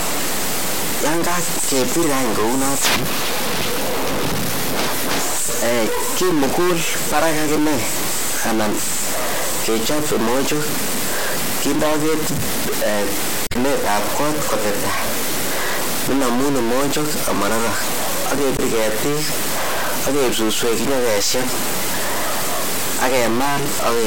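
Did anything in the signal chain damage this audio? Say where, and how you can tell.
Yes. A stuck bit, likely at the converter or its wiring, adds distortion across the whole speech clip and fills every pause with noise.

Damaged data in the compressed stream disrupts the codec stage at 13.47–13.56 s and 18.56–18.61 s. The decoder loses sync there, producing brief glitches.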